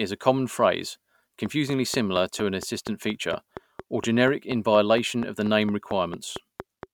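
Something in the chain, likely interference from nearby equipment or a faulty connection or power supply, keeps injecting a short pulse into the signal, producing a train of clicks from 1.46 s to 6.84 s. The pulses arrive at a regular 4.3 per second, around twenty in all, each with much the same shape and standing out well above the speech. They come through as a steady ticking laid over the talking and audible in the pauses too.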